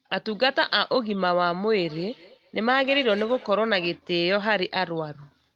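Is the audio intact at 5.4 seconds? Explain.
Yes, the audio is intact at 5.4 seconds, with no dropout, click or distortion there.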